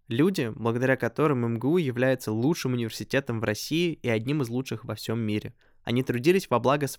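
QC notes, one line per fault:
1.26 s and 6.25 s: dropped samples. Each is a single sharp click in the speech, seen as a thin vertical line across the spectrum. The likely cause is a fraction of a millisecond of samples missing, so the waveform jumps abruptly to a later value.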